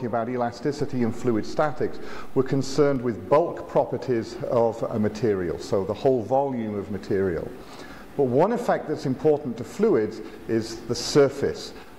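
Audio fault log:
0.80–2.96 s, DC step: the waveform's zero line jumps by about -30 dBFS at 0.80 s, then drops back at 2.96 s. Each sudden shift of the baseline gives a low thump, while the sound itself carries on unchanged.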